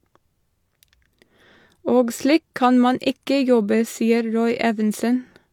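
Across the whole speech recording the signal stays intact and continuous, with no technical faults to report.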